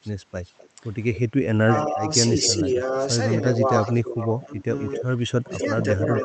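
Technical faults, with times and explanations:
0.02–1.19 s and 2.42–6.24 s, echo leak: a delayed copy of the speech trails the original by about 0.26 s, roughly 20 dB down at first, then much stronger at about 10 dB down. This is likely loudspeaker pickup the far-end echo canceller failed to remove. On a spectrogram it appears as faint duplicated harmonic striations shifted right, below the 8 kHz ceiling of the Opus call path.
0.69–6.24 s, speech suppressed in double talk: the main voice repeatedly dips, at its deepest by about 15 dB, and loses upper-frequency detail while the echo overlaps it. The likely cause is the echo canceller attenuating both signals when it cannot separate them. The waveform envelope shows sudden sags, and the spectrogram thins above the lower harmonics.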